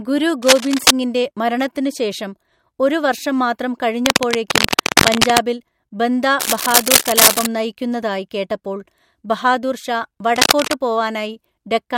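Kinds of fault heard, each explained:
Cable scratch noise: dense, uneven scratching bursts cover the speech at 0.43–0.92, 4.06–5.41, 6.39–7.46 and 10.36–10.74 s, roughly as loud as the speech or louder. This likely comes from a worn cable or connector whose contact resistance fluctuates as it moves.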